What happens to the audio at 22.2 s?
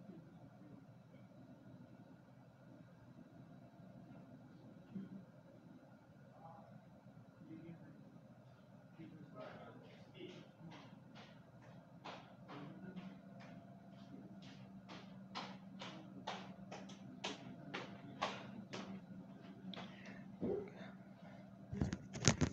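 Nothing goes wrong at 22.2 s; the audio plays through that moment intact, with no fault to be heard.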